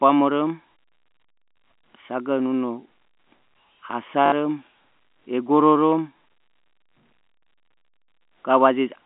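At about 4.26 s the speech hits a quick packet loss with the last packet repeated: roughly 60 ms, through 4.32 s, gets filled by replaying the same chunk. That fits three 20 ms packets, so there's a 50 Hz robotic stutter over the telephone-band G.711 line.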